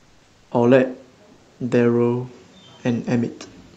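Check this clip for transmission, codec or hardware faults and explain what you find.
Two stretches of comfort noise in place of the background stand out. From 0.00 to 0.51 s and again from 1.33 to 1.59 s, the room noise loses its texture and becomes a smooth, uniform hiss, about 4 dB and about 3 dB quieter respectively. The likely cause is discontinuous transmission in the Opus codec: during pauses the sender stops streaming audio, and the receiver synthesises a rough spectral stand-in for the background until sound resumes.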